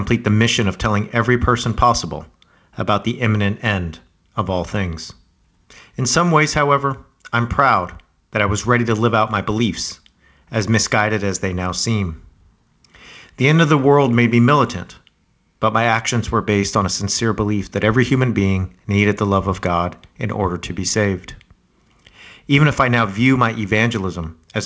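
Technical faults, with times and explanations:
No technical faults turn up in this speech clip, which comes through a G.722 call path that carries nothing above 8 kHz.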